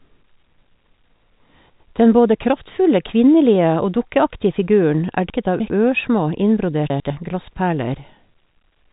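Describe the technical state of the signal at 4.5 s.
At 4.5 s the speech is intact, with no fault present, only the narrow telephone band of G.711 coding, with nothing above about 3.8 kHz.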